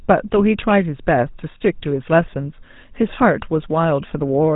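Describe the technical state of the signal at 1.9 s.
GSM full-rate codec damage runs through the whole clip, including 1.9 s. It's a band-limited voice model excited by sparse regular pulses, which fits the 13 kbps full-rate coder and gives the speech a buzzy, gravelly roughness with nothing above 4 kHz.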